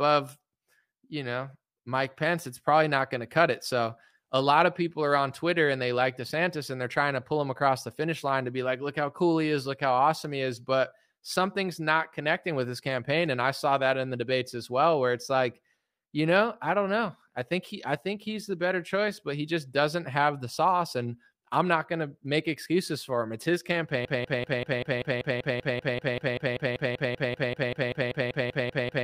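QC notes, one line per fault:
24.05–29.03 s, broken-record loop: a 194 ms fragment repeats back to back 26 times until the end, likely a stalled stream resending its last buffer.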